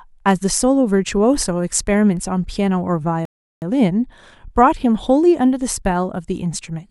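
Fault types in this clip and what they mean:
Rebuffering stall: the player ran short of downloaded audio and paused until more arrived. At 3.25 s the speech cuts to silence. It resumes at 3.62 s from the exact point it stopped. Nothing is skipped, but 367 ms is added.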